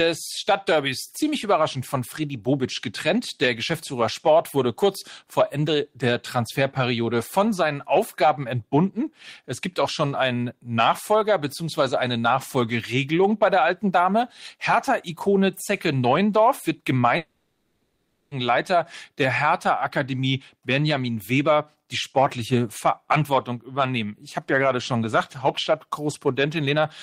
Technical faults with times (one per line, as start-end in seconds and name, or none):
17.17-18.33 long network dropout